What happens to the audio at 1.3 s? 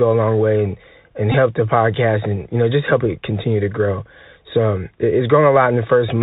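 At 1.32 to 1.34 s, between "long way and and" and "the podcast and you", a Bluetooth headset packet repeat occurs: lost packets were replaced by re-decoding the last one, a run fitting about five 3.75 ms packets, giving a brief buzz near 267 Hz rather than the silent gap of a plain dropout.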